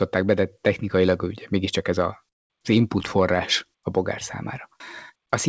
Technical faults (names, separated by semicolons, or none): call audio freeze